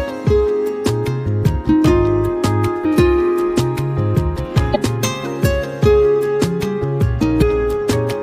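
Three brief bursts of damaged data in a compressed stream occur at 2.81 to 2.86 s, 4.72 to 4.76 s and 7.38 to 7.43 s, each about 44 ms long. Corrupted bytes make the decoder misread those frames and lose sync until it finds a valid header, so each spot becomes a short chirp, squawk, click or hole. Unlike a dropout, which only leaves silence, here the decoder also loses its place in the stream.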